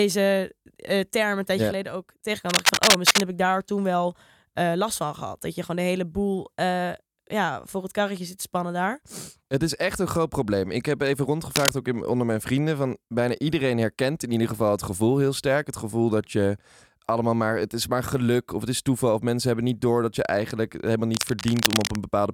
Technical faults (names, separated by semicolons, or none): cable scratch noise